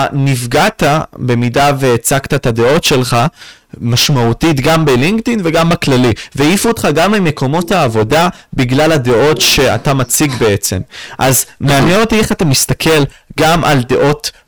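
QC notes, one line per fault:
Throughout: hard clipping. The speech is driven about 20 dB past what the stage can pass, so nearly a third of samples are cut flat. That gives a constant harsh fuzz on every loud sound, not the rounder, warmer grit of soft saturation.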